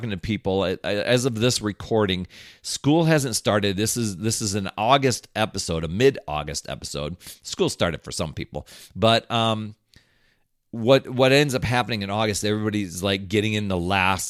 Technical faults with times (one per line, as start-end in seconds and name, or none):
none